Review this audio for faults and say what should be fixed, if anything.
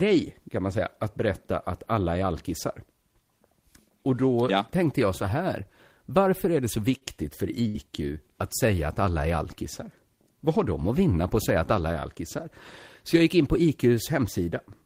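A short stall from a late packet occurs at 6.97 to 7.04 s. A packet arrived late and the jitter buffer ran dry. The receiver held the last sound for 37 ms, then resumed where it stopped. Nothing is lost, but playback now runs 37 ms later.

A burst of packet loss follows at 7.68 to 7.77 s. Consecutive packets never arrived in time. The receiver stretched and faded the last sound for 62 ms, giving a held buzz or fading hiss. It then jumped ahead, and about 60 ms of speech is missing.

To prevent both, deepen or adapt the jitter buffer and add forward error correction or packet redundancy on the link.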